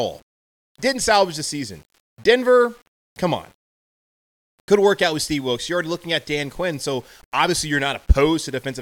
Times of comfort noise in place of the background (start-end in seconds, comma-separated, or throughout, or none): none